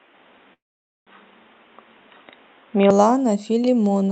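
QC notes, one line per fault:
0.00–2.91 s, input switched to a poorer device: the opening runs band-limited and boxy, with nothing above 3.8 kHz, a noise floor roughly 40 dB under the signal, and a level step of about 5 dB. At 2.91 s the sound opens up with no gap. The likely cause is the capture moving from a narrowband device to a better one. On a spectrogram there is a hard ceiling at 3.8 kHz that lifts to the call path's 8 kHz limit at 2.91 s, and the waveform envelope jumps at the switch.
0.53–1.09 s, call audio freeze: the last sound is stretched into a fading buzz that drops to near silence for about 500 ms, then the audio resumes where it stopped. The inserted gap is 532 ms, with nothing lost, so everything after it arrives 532 ms later. The likely cause is delayed packets emptying the jitter buffer. The waveform shows a decaying smear, then a flat run before the signal returns. 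On the spectrogram, frozen horizontal streaks give way to a blank band.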